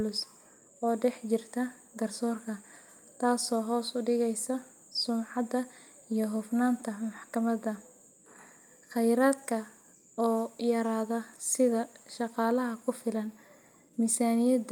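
Nothing in the speech stood out as a technical fault on listening.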